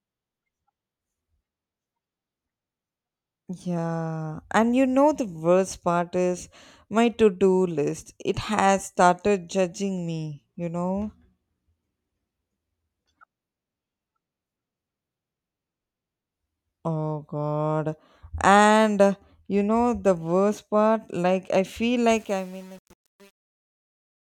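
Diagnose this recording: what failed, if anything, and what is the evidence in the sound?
The failure is truncation distortion on a fade, at the sample-format conversion stage. The closing fade-out, starting around 22 s just after "part like I feel", falls off smoothly in level but turns gritty from 22.12 s to the end at 24.34 s as it thins. The fade was applied with too few bits and no dither, which fits an 8-bit output. The quietest samples collapse onto a few coarse square steps.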